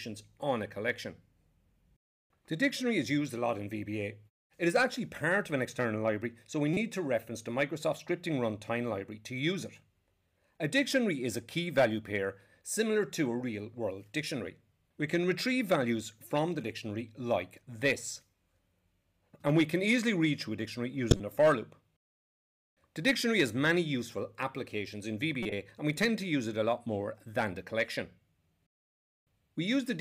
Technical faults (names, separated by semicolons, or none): corrupt frame decoded